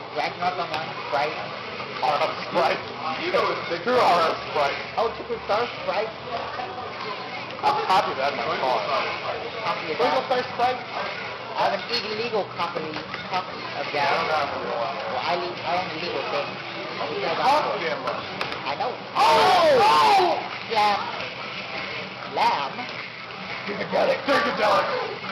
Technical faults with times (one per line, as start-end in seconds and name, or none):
none